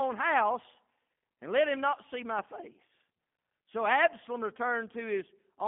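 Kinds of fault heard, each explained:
G.729 codec: The speech was pushed through a low-rate telephony codec that discards the actual waveform and rebuilds it from a modelled vocal tract filter, a pitch predictor and a handful of pulses per short frame, which fits G.729A at 8 kbit/s. Nothing survives above 3.5 kHz or below about 200 Hz, so the speech sounds boxed-in and dull, and the rebuilt excitation gives it a plainly audible rough, buzzy, synthetic edge throughout.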